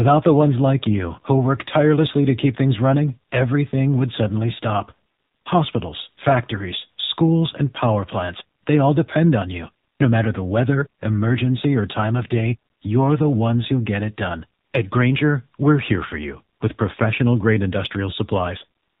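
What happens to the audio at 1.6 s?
At 1.6 s the speech carries the AMR narrowband mobile codec, as it does across the whole clip. Nothing above 4 kHz survives, and the voice turns buzzy and synthetic because a vocal-tract model driven by sparse pulses rebuilds it in 20 ms frames, which fits one of the low AMR-NB modes near 7.4 kbps. A simple low-pass filter would only dull the sound. This damage is plainly audible as an artificial, rasping texture.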